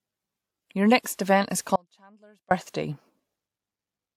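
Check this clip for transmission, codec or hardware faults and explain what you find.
Two faults are present: codec damage running through the whole speech clip, and one brief dropout.

Transcoding between lossy codecs runs throughout. The sound carries two overlapping sets of coding artefacts, and nothing remains above 19.7 kHz. The likely cause is an MP3 encode re-encoded as WMA 1, which fits about 100 then 96 kbit/s. The second codec spent bits re-coding the first codec's errors.

An audio dropout to a faint residue runs from 1.76 to 2.51 s, just after "next event is". The speech cuts out abruptly for 0.75 s. Only a faint sound remains, about 35 dB below the normal level. The signal was likely lost upstream while the later path stayed live.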